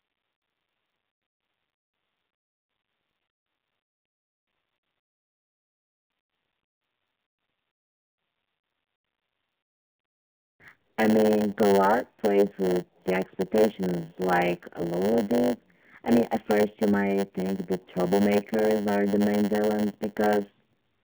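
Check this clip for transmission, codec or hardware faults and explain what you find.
Two faults run through the whole speech clip: narrowband mobile codec damage and a padded block size mismatch.

AMR narrowband mobile codec, throughout: the speech sounds muffled, buzzy and somewhat synthetic, with nothing above 3.5 kHz and a telephone-like band of roughly 150 Hz to 3.5 kHz. The damage is plainly audible, which fits AMR-NB coding at a low bitrate near 8 kbps. The codec rebuilds speech from a vocal-tract model excited by sparse pulses, so fine detail is lost.

Block size mismatch (padded), throughout: a steady 100 Hz buzz sits under the speech, and everything runs about 8% slow (0.919×) with the timbre unchanged. One stage writes blocks slightly shorter than the next reads, so each 10 ms block ends in a zero-filled gap of under 1 ms.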